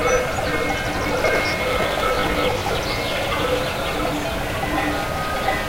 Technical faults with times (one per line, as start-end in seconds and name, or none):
0.97-2.75 processor overload crackle